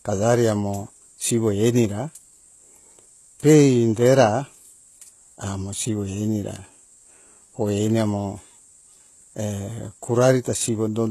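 Throughout the speech, the audio was likely coded with HE-AAC compression at a very low rate, which fits roughly 16 kbps. Only the lower spectrum is kept and the treble is rebuilt from copied bands, so s sounds turn gritty and lispy, with nothing above 12.3 kHz.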